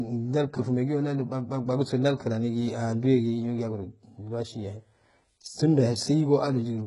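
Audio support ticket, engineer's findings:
HE-AAC compression, throughout: treble rebuilt from lower bands, s sounds gritty and metallic, nothing above 11.1 kHz. Likely a very low-bitrate encode, about 12 kbps by the heavy damage.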